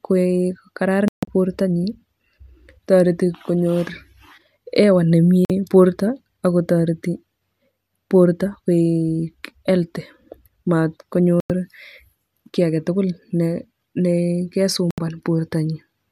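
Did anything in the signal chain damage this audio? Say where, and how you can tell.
Yes. The speech mutes abruptly four times. From 1.08 to 1.28 s it breaks into two holes, the longer about 144 ms. It drops out from 5.45 to 5.50 s just before "borto akotoreti", from 11.40 to 11.50 s, and from 14.91 to 14.98 s. This is a digital broadcast dropout at the reception and decoding stage: the receiver muted whenever frames arrived corrupt or missing. Gaps in multiples of about 24 ms point to whole lost frames, and that audio is unrecoverable.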